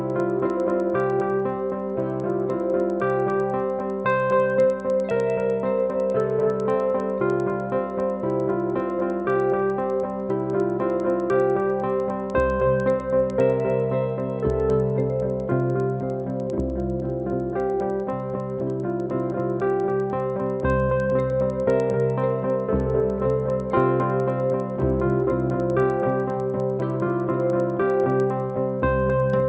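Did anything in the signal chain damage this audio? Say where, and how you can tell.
Yes. Resampler restarted on every block, in sample-rate conversion, throughout: ticks at 10 Hz mark 100 ms block edges, each resampled without its neighbours, consistent with 48 kHz to 16 kHz.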